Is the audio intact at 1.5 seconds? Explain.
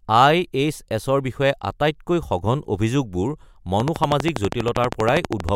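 Yes, the audio is intact at 1.5 seconds, with no dropout, click, distortion or other fault at that moment.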